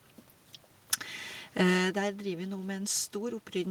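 No technical faults can be heard in this speech recording. The room's background noise sits underneath, and at around one and a half seconds the level shifts as the talker moves relative to the microphone, which belongs to the recording itself.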